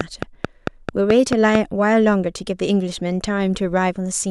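From the very start to 1.56 s, the speech carries a train of clicks. About seven short pulses arrive at a steady 4.5 per second. Each has much the same sharp shape. They sit roughly 15 dB above the speech, so they tick loudly over it and stay audible between syllables. The cause is likely interference from nearby equipment or a faulty connection or power supply, injecting a repeated pulse into the signal before it stops.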